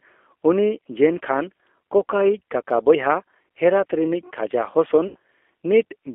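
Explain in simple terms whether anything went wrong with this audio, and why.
Two things went wrong. The whole recording passed through a G.729 codec, the low-rate compression used on many internet phone calls. Instead of storing the actual sound, it keeps a rough model of the speaker's throat and pitch and rebuilds the speech from that. The line also keeps only the range from about 300 Hz to 3.4 kHz. The result is clearly audible: the speech sounds thin, slightly rough and artificial, like a cheap phone line.

Near the end, from about 5.08 to 5.16 s, some data packets never arrived. This is VoIP packet loss concealed by the speech codec, and the gap fits roughly 70 ms of missing audio. To cover it, the decoder guessed by repeating and stretching the last bit of sound it had, letting it fade. That gap turns into a short, stretched, fading sound instead of real speech, and the sound stays weak or distorted just after it.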